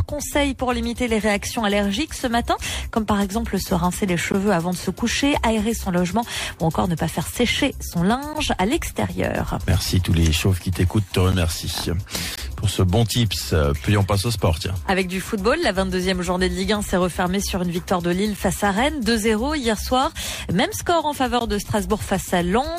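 Gaps between stream segments occur at 4.32, 8.33, 11.32, 12.36 to 12.38, 18.37 and 21.39 s, where adjacent segments' time stamps fail to meet and the player pads the hole with silence. Each hard-edged dropout lasts about 7 to 21 ms, consistent with one-second segment boundaries.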